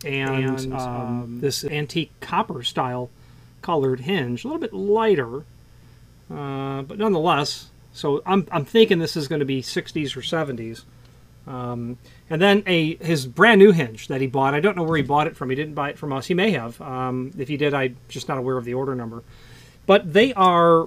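From the very start until 1.68 s, a doubled audio track plays: a second full-band copy trails about a fifth of a second behind, roughly 5 dB quieter, with no decay, then stops abruptly. The likely cause is a slower second capture path. Spectrograms show every onset repeated at that fixed lag.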